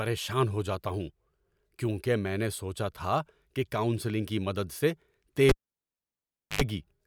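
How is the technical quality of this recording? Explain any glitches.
The recording has one clear fault, a cable pulled and plugged in, running from 5.49 s to 6.62 s, right after "کاؤنسلنگ کی مدد سے". A live signal lead was disconnected and reseated, so the path broke with a pop and dropped to near silence for about 1.08 s. As the plug went back in, only the tip touched at first, letting in roughly 87 ms of 50 Hz mains buzz before full contact brought the speech back with a second pop.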